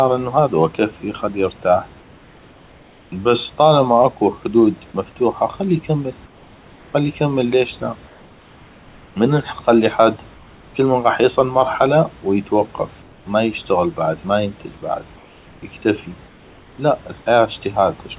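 In seven speech pauses the room background, about 30 dB below the speech and band-limited to 4 kHz by the call path, gives way to comfort noise in place of the background. This happens at 2.0–3.12 s, 6.26–6.94 s, 8.08–9.16 s, 10.34–10.74 s after "من نخلي حد", 13.02–13.26 s between "يصل مرحله ويتوقف" and "ما يشتغل بعد ما", 15.16–15.62 s after "بعد ما ينتج بعد", and 16.28–16.78 s. Each gap holds a flat, detail-free hiss about 2 dB quieter (about 3 dB at 16.28 s), likely synthesized by the receiver while the sender's transmission paused. Unlike a gate or dropout, the gaps never fall to silence.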